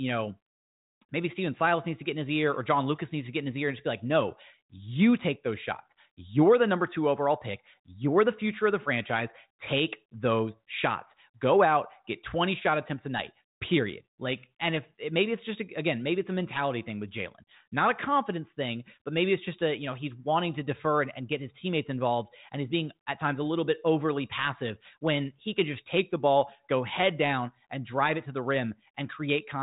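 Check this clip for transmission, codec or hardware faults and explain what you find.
No transmission, codec or hardware fault turns up in this speech; it comes through a G.726 ADPCM path at 40 kbit/s whose band stops at about 3.8 kHz, with at most a faint trace of the coding.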